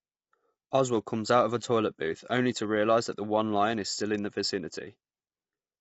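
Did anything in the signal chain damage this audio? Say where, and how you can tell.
Yes, at the codec stage, throughout the speech: it has the rough, grainy texture of low-delay AAC compression, likely AAC-ELD at a low rate, around 24 kbps. Short coding frames resolve the voice's harmonics poorly, so noise fills the gaps between them. On a spectrogram the harmonic stripes look smeared and speckled, with a hard ceiling at about 7.7 kHz and nothing above it.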